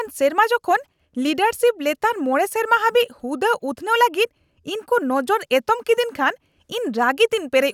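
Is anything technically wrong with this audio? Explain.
No, the signal shows no technical faults anywhere in the recording.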